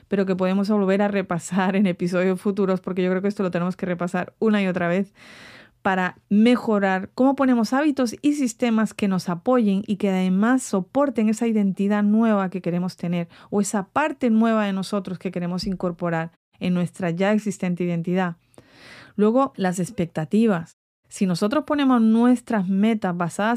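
No technical faults can be heard in this speech clip. In the pauses the output falls to silence and the background drops away, then returns in time for the next sound without clipping its start.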